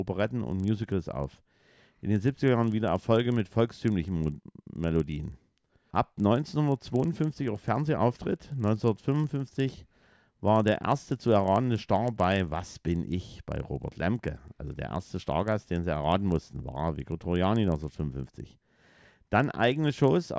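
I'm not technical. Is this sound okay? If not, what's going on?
No. Under the speech there is a faint, steady buzz, like tiny ticks 25 times a second, from start to end and only while someone is talking. This is a resampler restarted on every block: the audio was converted in separate 40 ms pieces, leaving a small glitch at each join.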